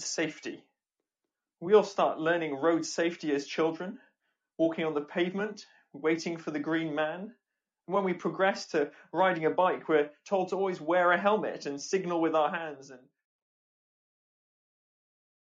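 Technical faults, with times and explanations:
No technical faults here; the sound just eases out with a smooth fade that starts around 12 s and is finished by 13.44 s, the way an editor would round off the end.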